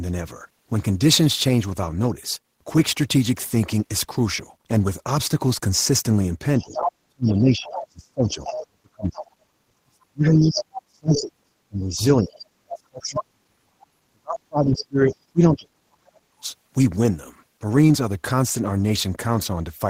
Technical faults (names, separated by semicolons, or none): other side's voice leaking through; speech suppressed in double talk